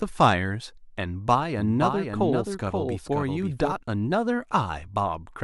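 A speech recording carries a doubled audio track from 1.58 s to 3.72 s: a second, full-band copy of the speech runs about half a second behind the original, around 5 dB quieter, with no decay or room colouring, and it cuts in and out abruptly at those times. The likely cause is a slower second capture path or an edit holding two offset copies. On a spectrogram, every speech pattern in that span is repeated half a second later, slightly fainter, and the waveform shows overlapping envelopes that start and stop with hard edges.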